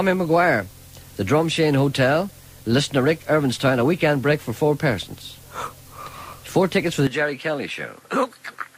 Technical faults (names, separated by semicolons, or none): input switched to a poorer device